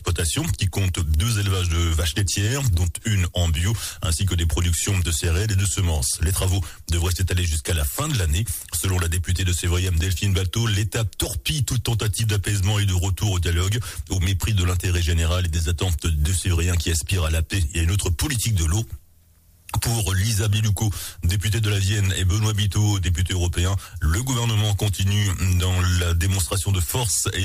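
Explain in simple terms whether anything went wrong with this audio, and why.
A bit error spike at 12.83 s is the one thing that went wrong: a single sharp tick. One digital bit in a single sample flipped, making that sample jump suddenly and return at once. That instant jump sounds like a click unrelated to the surrounding audio.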